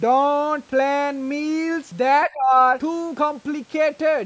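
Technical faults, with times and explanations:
2.27 to 2.58 s, speech suppressed in double talk: for roughly a third of a second the speech level sinks, by about 20 dB at its deepest, before recovering. The likely cause is an echo canceller facing simultaneous talk from the far end, unable to tell this talker apart from loudspeaker echo, and so turning everything down. The call microphone processing caps content at 8 kHz.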